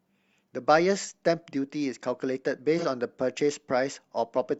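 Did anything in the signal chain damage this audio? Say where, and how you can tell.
Yes, at the codec stage. From 2.78 to 2.85 s the speech turns briefly smeared and noisy, consistent with AAC frame loss with concealment. About 43 ms is missing, which fits a single lost frame. The decoder reused the previous spectrum with scrambled signs or interpolated energy, so a spectrogram shows blurred, noise-like harmonics there.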